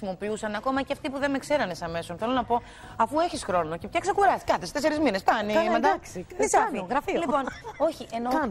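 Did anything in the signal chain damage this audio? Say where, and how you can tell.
Yes. From 0.57 to 1.20 s and 6.63 to 8.29 s, the audio runs 6.28% fast and 105 cents sharp, then snaps back. This is likely a drift correction step in buffer clock-matching. It is abrupt and level, unlike the gradual wavering of wow.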